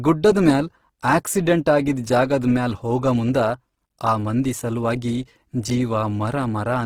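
Throughout the speech the sound is grainy and rough, with a noisy texture but few spectral holes and little swirl, and content reaching 20.3 kHz. This is likely Opus compression in CELT mode, filling starved bands with noise or folded energy, consistent with roughly 16 kbps.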